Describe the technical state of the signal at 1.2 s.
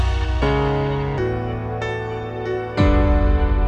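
A section at the wrong speed, likely from playback on a mismatched clock, runs 1.27 times fast from 0.0 to 1.18 s, raising pitch about four semitones and hurrying the sound.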